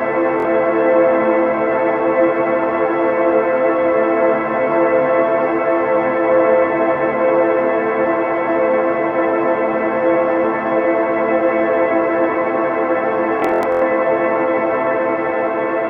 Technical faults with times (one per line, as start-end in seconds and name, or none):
0.40-0.45 Bluetooth stutter
13.40-13.82 Bluetooth stutter